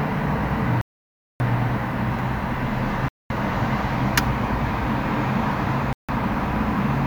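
The sound drops to silence three times: from 0.81 to 1.40 s (about 0.59 s), from 3.08 to 3.30 s (about 0.22 s), and from 5.93 to 6.09 s (about 0.16 s), then resumes each time. These are most likely Bluetooth stalls, where delayed packets left the receiving buffer empty until retransmissions arrived. On a waveform each gap is a flat line; on a spectrogram, a clean vertical blank band across all frequencies.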